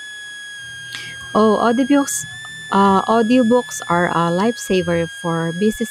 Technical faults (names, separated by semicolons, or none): switching supply whistle